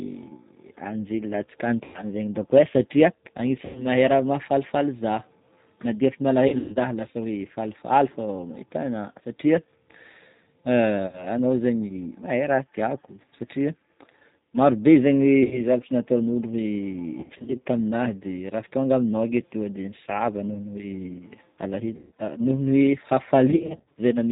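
Throughout, the speech carries the sound of the G.729 codec at 8 kbit/s. Nothing above 4 kHz comes through, so the voice is dull and boxy. The coder rebuilds each 10 ms frame from a vocal tract filter, a pitch predictor and a handful of pulses. That leaves the voice plainly rough and slightly synthetic.

VoIP packet loss, concealed by the speech codec, breaks in at 1.84, 3.65, 6.48, 11.07, 15.43, 17.20, 21.97 and 23.50 s. The gaps run from 60 ms at 11.07 s to 240 ms at 23.50 s. At 6.48, 17.20 and 23.50 s, the losses are scattered over 280 to 440 ms. Each time, the decoder stretches its last pitch and filter into a buzzy tone or coloured noise that fades. The voice then stays weak and smeared briefly after audio resumes.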